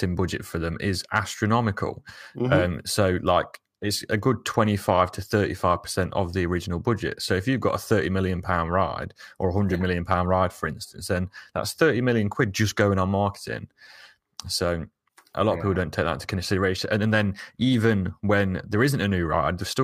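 Hard clipping hits the speech three times. After "budget for them is" it runs from 1.16 to 1.19 s, about 2 dB over. After "it's a good" it runs from 4.59 to 5.01 s, about 1 dB over. It returns from 10.11 to 10.14 s, just before "ride for instance then". Each time the peaks exceed what the signal path can carry and are cut flat. This is heard as a brief crackle on the loudest moments.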